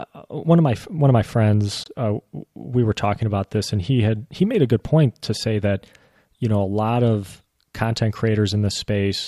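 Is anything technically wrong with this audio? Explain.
Yes. From 1.84 to 1.88 s, just before "uh we were talking", the speech cuts to silence and resumes further along, likely a Bluetooth dropout, consistent with a packet arriving too late and one frame being lost.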